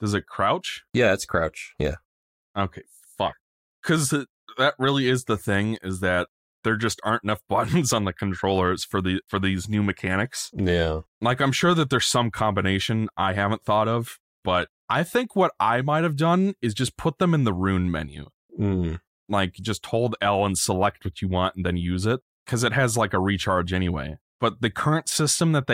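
No technical faults can be heard anywhere in this speech recording. At no point does the audio change in a way that would mark a fault.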